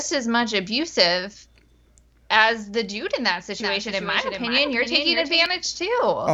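From 3.60 s to 5.46 s a second copy of the speech runs underneath the first, trailing it by roughly 0.4 s and sitting about 5 dB quieter. It is a clean, full-band repeat with no reverberant tail or room colouring, and it cuts in and out abruptly at those edges. This is a doubled audio track, most likely the signal being picked up again through a slower route, or an edit leaving two offset copies mixed together.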